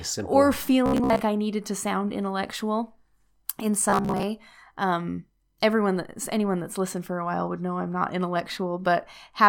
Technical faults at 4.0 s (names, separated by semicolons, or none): robotic sound from repeated short buffers